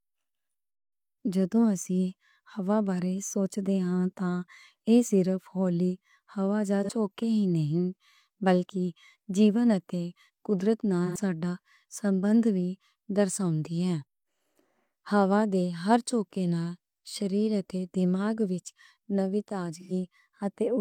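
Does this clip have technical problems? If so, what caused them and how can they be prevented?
Yes. AAC frame loss with concealment smears the speech at 6.84 to 6.89 s, 11.06 to 11.17 s and 19.80 to 19.92 s. The decoder patched each gap from the last good spectrum. Error protection or retransmission on the link would prevent it.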